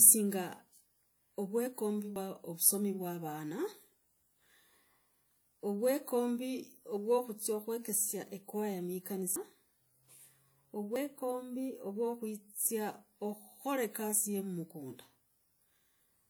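It's a speech recording, and there are two separate problems. Across the whole thing you get what sounds like low-bitrate audio saved at a high bitrate: the file is a generous MP3, but the coding artefacts sound like they come from an earlier, much leaner encode, likely a low-bitrate WMA pass that got re-encoded. The bigger second encode can't restore the detail the first one threw away.

The second problem is three spots where the audio jumps forward: at 2.16 s, 9.36 s and 10.96 s. There's no gap of silence. The sound just lurches ahead, skipping roughly 70 ms, 100 ms and 40 ms respectively. That pattern points to a dropped buffer (overrun), likely the capture side not collecting samples before the hardware overwrote them, so the two edges got spliced directly together.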